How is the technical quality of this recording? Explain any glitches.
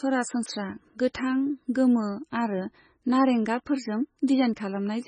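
Poor: heavy compression damage runs through the whole recording. Throughout, the speech sounds watery and swirly, with nothing above 9.4 kHz, most likely MP3 compression at a very low bitrate, around 17 kbps. Starved of bits, the encoder cuts the treble and drops weak frequency lines frame by frame, so they flicker and consonant attacks smear. A plain low-pass filter would only dull the sound, without this swirling.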